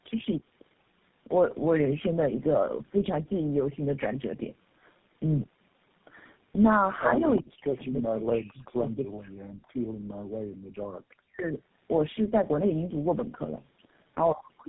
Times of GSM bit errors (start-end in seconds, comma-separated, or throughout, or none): none